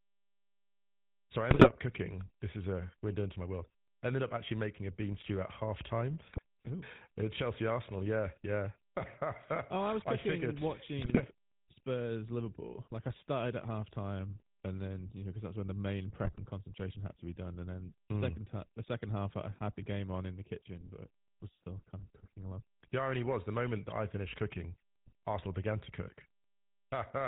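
From start to finish the speech passes through the GSM full-rate codec, whose sound is consistent with the 13 kbps original GSM coder. It rebuilds the voice from a vocal-tract filter driven by a sparse, regular pulse train, discarding much of the true excitation and everything above 4 kHz. The result is plainly audible: a dull, band-limited voice with a buzzy, gravelly roughness riding on every voiced sound.

Four times the link corrupts the coded data, and GSM bit errors reach the decoder: 1.5 to 1.7 s, 6.3 to 6.4 s, 11.0 to 11.25 s, and 16.25 to 16.39 s. Damaged filter, pitch and gain values make the decoder misshape the spectrum and misjudge the level for a few frames. Each burst comes through as a brief squawk and gargle with pops. The first has the highest error rate, roughly 4%.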